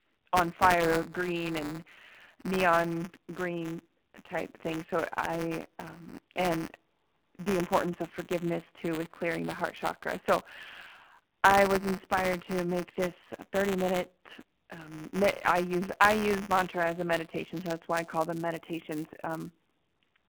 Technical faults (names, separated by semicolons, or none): AMR narrowband mobile codec; buffer tearing